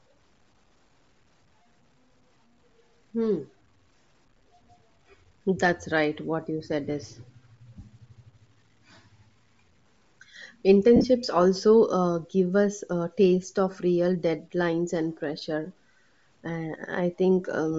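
From start to finish, quiet passages and decaying syllable tails carry a gritty, grainy distortion that rises and falls with the speech and sits around 45 dB below it. The likely cause is low bit depth without dither: the samples were truncated to roughly 10 bits, so the rounding error follows the signal.

Throughout, the speech also has a breathy, grainy edge, with the upper spectrum sounding thin and noisy instead of detailed. This is plainly audible Bluetooth LC3 compression, likely at a low bitrate around 32 kbps with short 7.5 ms frames. The encoder zeroes much of the treble and fills it with noise.

From 10.96 to 11.05 s, the sound breaks into a noisy smear that briefly fades and then recovers. This comes from lost LE Audio frames: about 67.5 ms went missing across a 75 ms stretch, with the longest gap around 50 ms, which fits nine lost 7.5 ms frames. The decoder refilled the gaps by reusing the last spectrum with random signs, then faded it.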